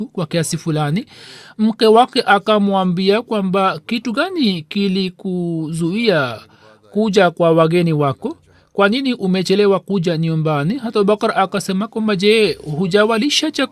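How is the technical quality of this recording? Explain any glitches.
Nothing here sounds broken: the recording runs along without any glitches worth pointing out.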